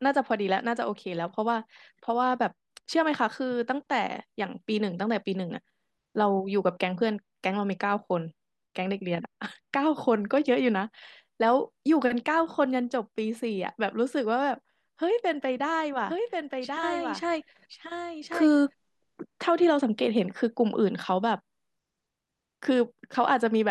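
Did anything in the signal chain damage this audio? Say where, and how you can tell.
Yes. From 16.09 to 19.43 s a doubled audio track appears: a full-band copy about 5 dB quieter trails the speech by roughly one second, with no decay. It likely stems from a second, slower capture path. The spectrogram shows displaced duplicate patterns starting and stopping abruptly.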